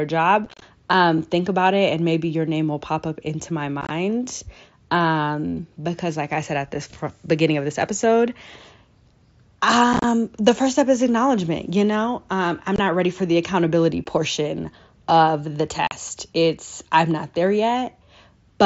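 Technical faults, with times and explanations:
0.45–0.62 s, 3.81–3.91 s, 9.93–10.04 s, 12.76–12.79 s, 14.04 s and 15.87–15.92 s: unconcealed Bluetooth headset packet loss. Short voice packets between headset and phone went missing, and nothing filled the gaps, which points to packets of about 7.5 ms. The first three bursts scatter 60 to 90 ms of holes over up to 165 ms, so they sound like crackle, the first just before "um think about it". Gaps after "ready for the accountability" and "of the" cut off sharply.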